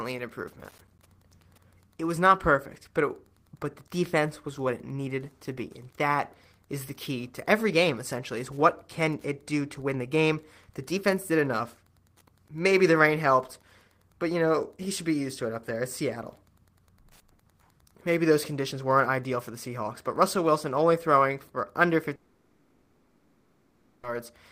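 Running under the whole clip is Wi-Fi interference: a faint, steady tick about ten times a second, about 40 dB below the speech. A nearby radio's beacon, every 102.4 ms, is getting rectified into the audio circuit, so the ticks keep strict time.

Right after "an improvement", from 0.71 to 0.99 s, there's a short burst of processor overload crackle. The processor missed a handful of deadlines in a row, each one dropping in a hard-edged sliver of silence. That fits buffers of roughly 10 ms, and together the gaps come across as gritty tearing.

Then after "only throwing for under", from 22.15 to 24.05 s, the audio turns into a smeared buzz that carries on for about 1.9 s, with no real silence in it. That's likely a long network dropout: nothing arrived, so the receiver kept extending the last sound, and that stretch of audio is simply gone.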